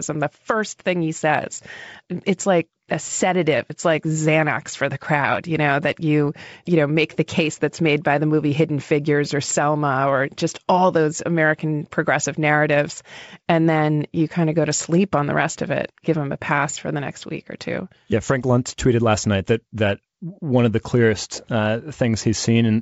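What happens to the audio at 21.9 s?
Nothing goes wrong at 21.9 s: the speech there stays intact, carried by the same 64 kbit/s G.722 wideband telephone coding heard throughout, with no more than faint coding damage.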